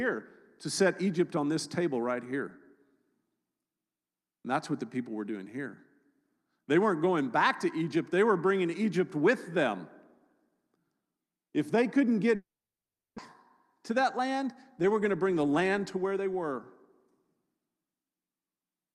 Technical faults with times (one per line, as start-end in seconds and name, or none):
12.35-13.20 long network dropout
13.90-16.27 jitter buffer speed-up